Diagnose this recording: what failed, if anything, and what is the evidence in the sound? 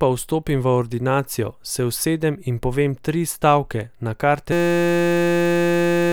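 A system hang loop at the driver or buffer stage: from 4.52 s to the end, the speech gives way to a steady buzz at 172 Hz. The hardware kept replaying one 5.8 ms segment, which fits a 256-sample ring buffer, so about a second and a half of audio is missing.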